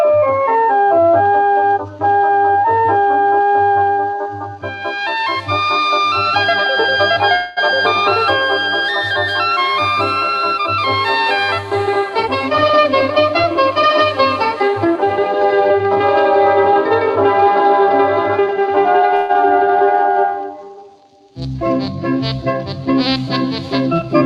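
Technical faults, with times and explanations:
7.35 to 7.59 s, call audio freeze: the sound hangs as a fading buzz for about 0.21 s, likely from delayed packets, then resumes where it stopped.
12.23 to 15.29 s, jitter buffer speed-up: tiny pitch-period pieces are cut repeatedly, so the sound runs 7% fast at unchanged pitch, trimming roughly a fifth of a second.
19.15 to 19.31 s, call audio freeze: a shorter fading buzz fills about 0.14 s before the sound picks up again, with nothing lost.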